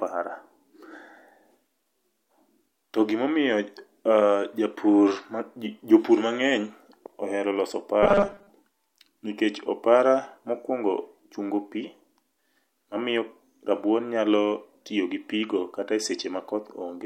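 At 8.03 s, just after "ohero loso", new audio likely stopped arriving in time, so short buffers were replayed for most of the stretch to 8.49 s. This robotic sound from repeated short buffers imposes a rigid, metallic 200 Hz buzz, which fits a 5 ms repeat.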